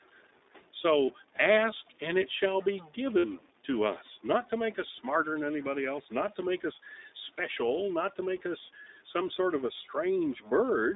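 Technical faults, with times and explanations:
throughout, stuck bit: A distortion rides on every sound, and the pauses are filled with a gritty noise rather than falling quiet. This likely comes from one data bit stuck at a fixed value, so that about half the samples are wrong by that bit's weight. Unlike codec roughness, it persists even in silence.
throughout, iLBC codec: The speech is narrowband, roughly 250 Hz to 3.7 kHz, with nothing above. It has a plainly audible rough, slightly synthetic quality, which fits iLBC at 15.2 kbps coding each 20 ms frame independently. That frame-by-frame roughness sets it apart from the steady stuck-bit noise.
1.06–1.09 s, 3.18–3.25 s, 7.36–7.40 s, lost iLBC frames: There are gaps of about 20, 60 and 20 ms, where the decoder repeats the last pitch cycle mixed with noise. Each gap sounds like a brief held, buzzy vowel, longest at 3.18 s. Normal speech returns almost immediately because the frames stand alone.
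6.83–7.16 s, 8.74–9.15 s, speech cut by the noise suppressor: Parts of the speech dip by about 9 dB and about 8 dB over roughly a tenth and a fifth of a second. They sound swallowed and faint. Unlike lost frames, there is no buzzy fill, only speech pulled down with the background.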